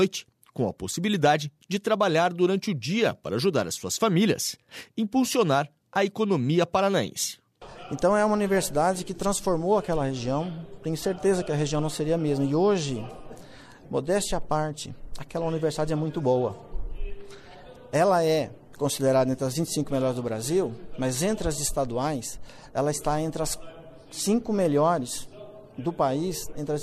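No technical faults can be heard anywhere in the recording. No dropouts, clicks, distortion or level jumps interrupt it at any point.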